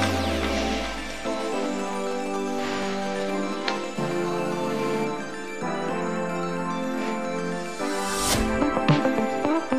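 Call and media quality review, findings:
GSM phone buzz, 3.96 to 5.05 s. Nearby 2G handset on a call, bursting at about 217 Hz; audio input stage rectifying the RF pulses. Hard, raspy buzz with dense harmonics, steady throughout, unrelated to the signal, about 12 dB below it. Probable component: the audio circuit.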